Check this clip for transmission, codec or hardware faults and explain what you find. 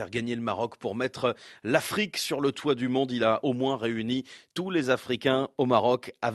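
Nothing stood out on listening to this speech clip, which came through an Opus call path with its audio band reaching up to about 12 kHz.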